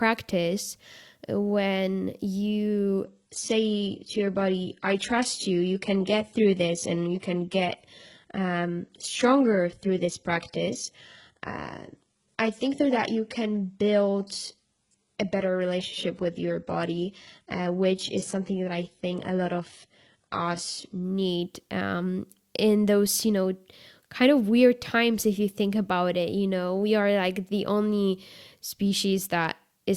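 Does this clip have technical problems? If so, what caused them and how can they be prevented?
Yes. From 3.04 s to 21.04 s the speech abruptly loses clarity with no gap, as an adaptive stream at a lower bitrate took over when the connection slowed. The sound fits a drop from 96 kbit/s AAC-LC to 12 kbit/s HE-AAC. A spectrogram shows content ending sharply at 11.1 kHz, with smeared, synthetic-looking treble. Preventing this means a steadier connection or a larger playback buffer, so the player never switches down.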